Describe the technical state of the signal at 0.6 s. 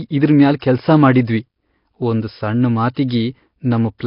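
Around 0.6 s, just after "ಇದ್ರ್ ಮ್ಯಾಲ್", there is pre-echo from 0.59 to 0.62 s. The transform codec spread the quantisation noise across a whole block, so noise sized for the loud onset that follows also filled the quiet gap ahead of it. That leaves a brief hiss, about 26 ms long, creeping in before the attack, which then lands soft and smeared rather than crisp.

That moment also carries the damage of the Nellymoser compression, likely Nellymoser Asao, which runs through the whole clip. The codec codes fixed short blocks with very few bits per sample, consistent with a rate near 22 kbps. It starves weaker bands entirely and patches them with noise. Nothing survives above 5.3 kHz, and the speech takes on a heavy, rough, hissy halo with a murky, underwater smear.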